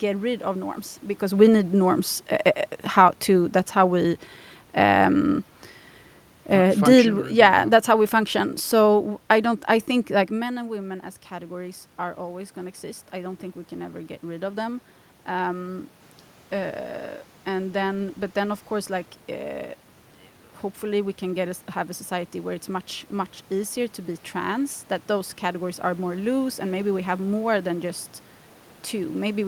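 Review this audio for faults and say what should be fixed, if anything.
From 6.52 to 9.96 s the level sinks by about 4 dB as the automatic gain control decides the input is too hot and eases its gain down over several seconds. This is automatic gain falling rather than the talker shifting position: the room noise drops in step with the speech, whereas the talker's own movement around 10 s changes only the voice. A fixed input gain set with headroom for the loudest passages would prevent it.

From 10.64 to 19.57 s the opposite happens. After the input falls by about 11 dB, the gain control slowly climbs about 7 dB to compensate, so speech and background swell together over roughly nine seconds. That shared, gradual rise marks it as automatic gain rising; a talker moving closer would raise the voice quickly while the room noise stayed put. Disabling the automatic gain control, or slowing it and capping its range, would prevent it.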